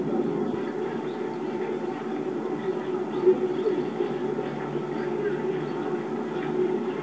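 No technical faults are audible.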